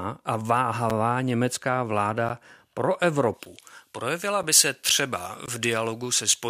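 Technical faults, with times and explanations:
0.90, 2.29, 3.46, 4.43 and 5.46 s, block of digital silence: the sound drops out for 4.6 to 17.4 ms, heard as ticks or dips, the longest as a short hole. The 5.8 and 11.6 ms gaps fit unfilled 256- and 512-sample buffers.
3.34 to 6.49 s, pre-emphasis left on: the treble boost was never undone, leaving about 11 dB extra at 10 kHz against 1 kHz, so the speech turns thin, bright and sibilant. This fits a J.17 curve.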